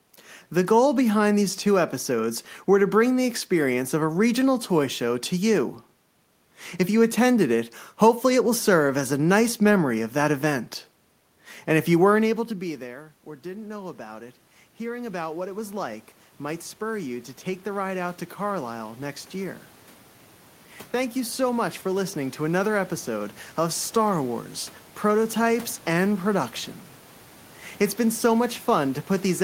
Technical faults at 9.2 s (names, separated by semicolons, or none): none